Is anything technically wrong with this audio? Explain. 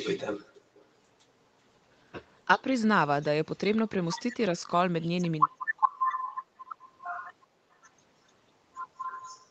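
Yes. Background gated by the echo canceller occurs at 0.63–0.75 s, 5.81–6.18 s, 6.36–6.83 s and 7.46–7.78 s. While the far end played through the loudspeaker, the canceller clamped the microphone, so room sound dropped by about 24, 14, 28 and 24 dB before returning.

Speech suppressed in double talk appears at 2.56–2.61 s. The voice dips by roughly 10 dB for about 50 ms, likely because the canceller couldn't separate the talker from loudspeaker echo and turned both down.

Echo leak appears at 6.18–6.36 s and 7.72–7.76 s. A delayed copy of the voice, about 379 ms and 392 ms late, can be heard. At 6.18 s it is fairly audible, around 15 dB below the speech, and at 7.72 s it is very faint, around 40 dB down. It likely comes from residual loudspeaker pickup that got past the canceller.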